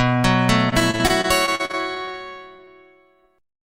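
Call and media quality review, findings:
Repeated packet loss (robotic sound), 0.69–2.15 s: choppy stutter from about a dozen short holes, the longest 43 ms, with roughly a fifth of the stretch synthesized. The jitter buffer or decoder concealment keeps extending the last frame. Spectrogram shows smeared, repeated frame textures and notches.

Short concealed packet loss, 2.56–2.60 s and 2.64–2.69 s: two brief smears, each hiding 20 ms of missing audio. Decoder PLC continues the prior sound, then cross-fades back. Waveform shows flattened stretches with soft seams.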